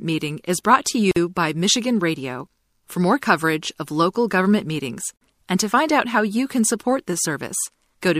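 At 1.11 to 1.16 s and again at 5.16 to 5.21 s, four seconds apart, the speech drops out for about 50 ms: a gap at a join of encoded pieces, where untrimmed encoder delay and end padding leave silence. A waveform shows a flat stretch with smeared edges; a spectrogram, a full-height blank column.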